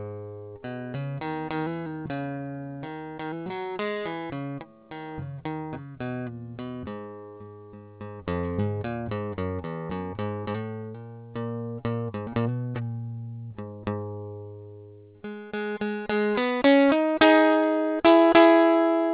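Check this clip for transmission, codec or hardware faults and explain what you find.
One fault runs through the whole music clip: aliasing. Content above 4 kHz folds back as unrelated tones, which fits resampling from 48 kHz to 8 kHz without filtering. This gives gritty, metallic highs about 25 dB down, with mirrored streaks packed hard against the 4 kHz band edge on a spectrogram.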